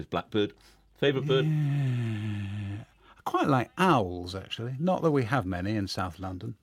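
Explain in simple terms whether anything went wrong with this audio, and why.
Something did go wrong. From 0.44 s to 3.23 s there is mains hum. It is a steady, low buzz at 50 Hz, the frequency of the power supply. It sits quietly under the main sound. Mains hum happens when electricity from the power line leaks into the audio signal. A ground loop between connected equipment or a nearby transformer can do this. The hum then stops at 3.23 s.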